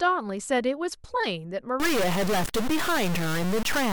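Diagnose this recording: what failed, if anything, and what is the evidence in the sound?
From 1.8 s to the end, the speech turns harsh and buzzy, and pauses fill with noise. This is a stuck bit, likely a failed converter data line, pushing roughly half the samples off by a fixed step of about -25 dBFS.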